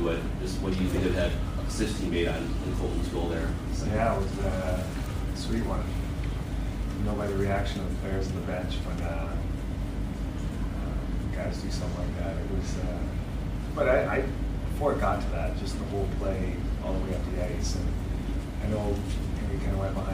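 No technical faults can be heard anywhere in this clip.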